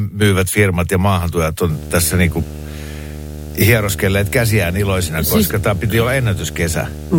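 Video or display buzz enters at 1.69 s and runs to the end: a display or video cable couples a 75 Hz field-rate buzz with hash above it, around 15 dB below the speech.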